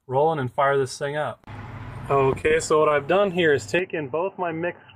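From 2.41 to 3.24 s, repeated packet loss makes the sound choppy, with pieces missing. Six short holes, the longest 23 ms, are patched by stretching the preceding sound. On a spectrogram they appear as smeared, repeated slivers with brief gaps between them.

At 3.79 s, with no silence at the join, the sound turns dull and boxy and stays that way to the end, most likely because the input switched to a poorer device. The spectrogram shows everything above 3 kHz cut off sharply. The waveform drops by about 5 dB, and a faint new noise floor appears well below the signal.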